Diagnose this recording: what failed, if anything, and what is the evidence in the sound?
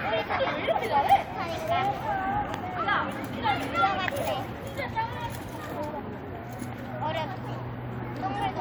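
Nothing failed in this recording of sounds, and the sound offers no evidence of a fault at any stage.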